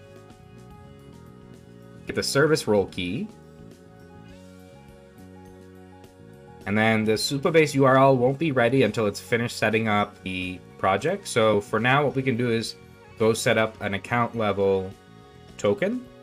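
The audio has three spots where compressed frames were skipped, at 2.10, 10.26 and 11.54 seconds. Each time the playback jumps forward instead of cutting out. The first and last jumps lose around 30 ms, which fits a single 32 ms frame missing from the file or rejected by the decoder. The one at 10.26 s skips roughly 150 ms, about four frames' worth.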